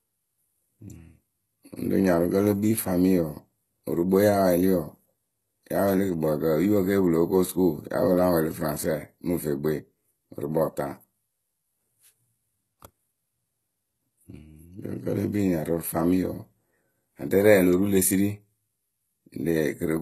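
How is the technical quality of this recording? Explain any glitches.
The recording carries plainly audible codec damage from start to finish, and the character of it points to HE-AAC compression at a very low bitrate, roughly what a 16 kbps stream would give. Nothing reaches above 12.3 kHz. The treble is likely rebuilt by spectral band replication, copying lower bands upward under a coarse envelope, so its harmonics do not line up with the speech below. S sounds come out gritty, metallic or lispy.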